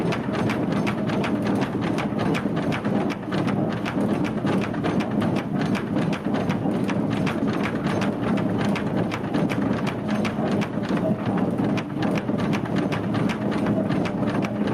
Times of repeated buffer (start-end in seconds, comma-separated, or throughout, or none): none